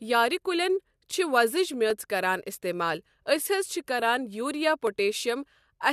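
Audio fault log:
0.43–4.87 s, clock drift buffer slips: a brief click recurs every 1.48 s, about four times, during the speech. This is likely two free-running clocks about 200 ppm apart, each slip dropping or repeating around fifteen samples. The strict regular spacing distinguishes it from random dropouts.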